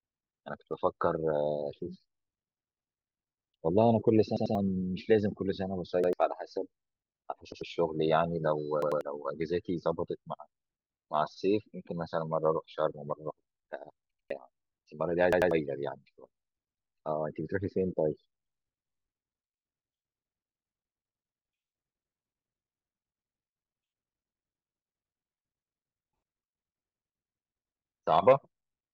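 Repeated buffer stutters at 4.37, 6.04, 7.52, 8.82, 14.12 and 15.33 s: late data made playback replay a 93 ms block, which fits a 4096-sample buffer, once or twice, with hard joins, dropping roughly 0.1 to 0.2 s of speech.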